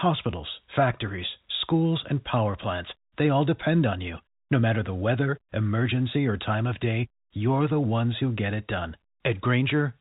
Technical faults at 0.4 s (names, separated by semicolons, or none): none